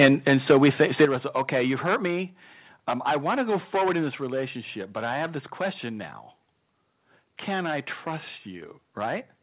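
Hard clipping runs through the whole of this speech recording: the signal is overdriven by about 10 dB, so a few percent of samples are cut flat, adding harsh fuzz to every loud syllable. Microphone overload appears from 0.00 to 0.06 s, with peaks about 3 dB past the converter's limit and a large share of samples flattened into crackle, likely from an input volume set too high. A microphone volume step-down follows at 0.06 s (about 4 dB), then at 1.05 s (about 7 dB), 2.07 s (about 2 dB) and 4.11 s (about 2 dB), each a sudden drop in voice and background level, likely automatic gain control reacting to the distortion. Nothing above 4 kHz is present, which fits a narrowband G.711-style call path.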